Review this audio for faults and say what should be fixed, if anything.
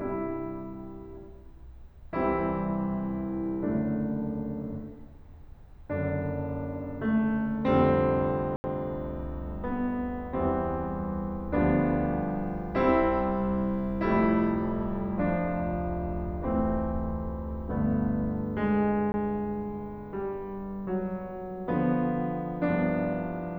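Blocks of digital silence: samples were zeroed at 8.56–8.64 s (80 ms) and 19.12–19.14 s (20 ms), so the music drops out abruptly. Give the audio process enough buffer headroom and scheduling priority that the output buffer is always filled in time.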